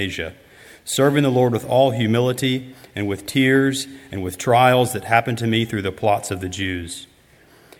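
No technical faults can be heard anywhere in this audio. Nothing in it calls for a timestamp or a repair.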